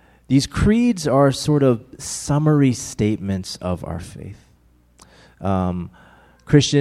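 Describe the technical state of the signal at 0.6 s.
At 0.6 s the speech signal is intact, with no technical fault present at that moment.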